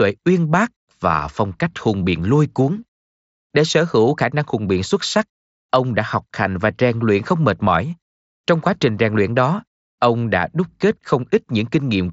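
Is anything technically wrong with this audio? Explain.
No, nothing in this speech stood out as technically wrong on listening.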